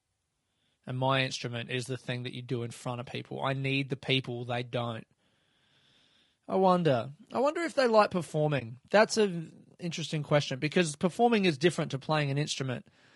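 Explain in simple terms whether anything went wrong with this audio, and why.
Two things went wrong here, one that lasts the whole clip and one brief moment.

All the way through, the speech sounds rough and grainy, with a hiss that sits in between the natural tones of the voice, and the upper end sounds thinned out and artificial. That's the signature of low-delay AAC compression, likely the AAC-ELD codec used for video calls. To keep the delay tiny it chops sound into very short slices, which makes it hard to capture a voice's pitch cleanly, and here it's squeezed hard enough that the damage is plainly audible.

Then, from about 8.59 to 8.62 s, the sound briefly drops out. It's a brief dip, because the sound fades down and back up on either side. That's AAC frame loss with muting. A chunk of the compressed stream, about 20 ms of audio, which fits a single lost frame, never made it, so the decoder filled that slot with silence and blended the edges smoothly instead of guessing at the missing sound.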